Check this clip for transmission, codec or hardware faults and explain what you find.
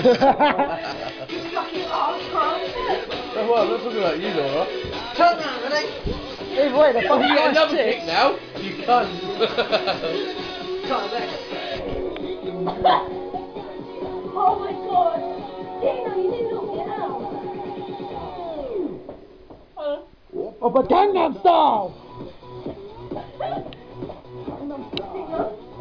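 No faults turn up in this clip.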